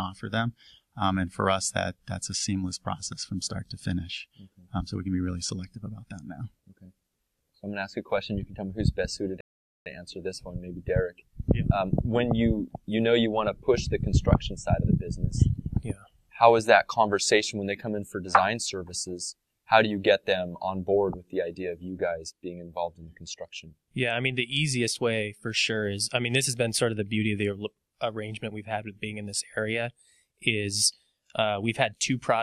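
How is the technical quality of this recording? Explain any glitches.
One glitch affects playback. At 9.41 s a rebuffering stall adds about 0.45 s of silence; playback ran dry, waited for data, then resumed exactly where it stopped, unlike a dropout, which loses audio.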